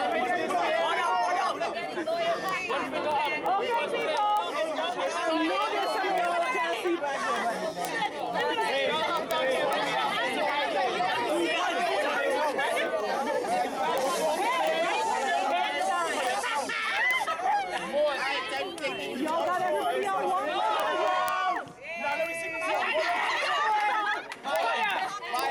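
From 0.12 s to 25.46 s, word clock ticks recur roughly every 0.07 s. An unlocked clock drifting around 300 ppm slips single samples. Unlike random clicks, the ticks are evenly spaced.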